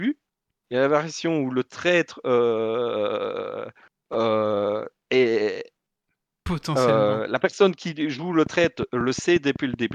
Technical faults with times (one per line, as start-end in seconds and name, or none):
8.46-9.92 train of clicks